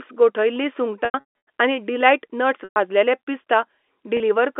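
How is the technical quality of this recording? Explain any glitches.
The recording, carried as G.711 telephone audio limited to about 250 Hz to 3.5 kHz, has three dropouts caused by packet loss with pitch repetition. They occur at 1.05 to 1.24 s, 2.64 to 2.76 s and 4.17 to 4.20 s. When packets went missing, the receiver filled each gap by repeating the last pitch period, so short gaps briefly hold on a buzzy, sustained tone, while longer ones fade into silence. The first dropout is the worst: 330 ms of audio was lost across 420 ms, with the longest run lasting 150 ms. The later gaps lost 120 ms and 30 ms.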